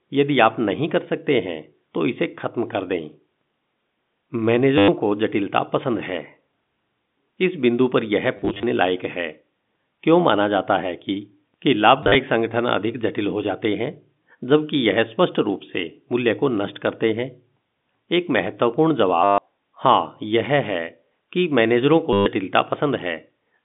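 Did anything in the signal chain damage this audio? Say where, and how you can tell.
Yes, at the network stage: packet loss with last packet repeated, at 4.78–4.88 s, 8.37–8.63 s, 12.03–12.15 s, 19.24–19.38 s and 22.13–22.26 s. The receiver replayed the last packet to fill each gap, so the sound stutters with a short robotic buzz near 100 Hz, which fits 10 ms packets. Unlike a dropout, the gaps are filled rather than silent. At 8.37 s and 12.03 s the losses are scattered, giving broken bursts rather than one solid buzz.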